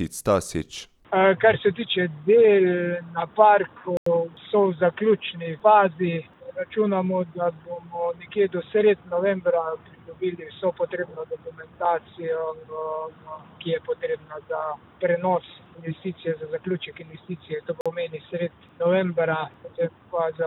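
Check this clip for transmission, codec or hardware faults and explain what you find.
Two dropouts are audible, both blocks of digital silence. From 3.97 to 4.06 s the signal drops to silence for about 93 ms, and from 17.81 to 17.86 s for about 46 ms. The output buffer likely went unfilled and was zeroed. Each cuts out with hard edges around a short hole. The lengths fit 4096- and 2048-sample blocks.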